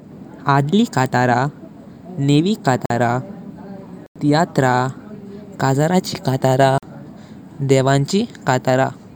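Blocks of digital silence hit at 2.86 s (46 ms), 4.06 s (93 ms) and 6.78 s (46 ms). Unfilled output buffers, fitting 2048 or 4096 samples, produce short holes: flat waveform gaps and blank vertical spectrogram strips.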